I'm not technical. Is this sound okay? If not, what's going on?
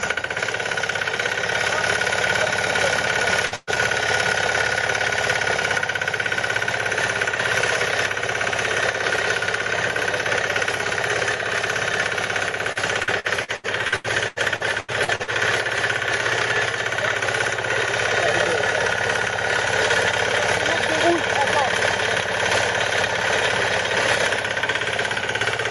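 No. There are three distinct problems, all caused by pieces of the audio going missing in transmission and being patched over by the receiving end.

First, at 3.47 s there is a short concealed packet loss. About 40 ms of audio arrived too late or not at all, so the receiver filled that hole by stretching out the sound that came just before it and then blending back into the real audio. You hear a quick smear or wobble, and any very short sound in that moment can disappear.

Right after that, from 3.56 to 3.70 s, comes a burst of packet loss. This time about 120 ms went missing in one run. The receiver again carried the previous sound forward, but over a gap that long the patch turns into a held buzz or a fading hiss. When the real audio comes back, whatever should have been in that eighth of a second is simply gone.

Then, from 12.72 to 15.30 s, there is repeated packet loss, which gives a robotic sound. 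Across those two and a half seconds, thirteen separate chunks went missing, the longest about 80 ms, adding up to roughly a quarter of the stretch. Each gap gets the same stretched-sound patch, and the next one arrives before things settle, so the audio turns choppy with pieces missing throughout.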